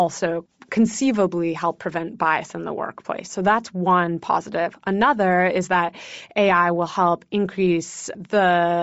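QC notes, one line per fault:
throughout, Bluetooth LC3 compression: plainly audible grainy, breathy edge on the speech, with the upper band sounding noise-filled rather than detailed, likely from LC3 at low bitrate zeroing high-frequency content and substituting noise, consistent with about 32 kbps and 7.5 ms frames.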